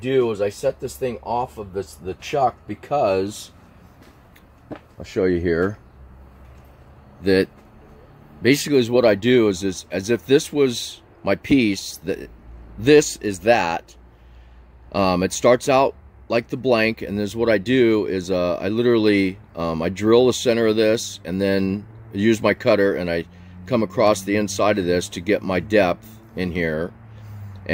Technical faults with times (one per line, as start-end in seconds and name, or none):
none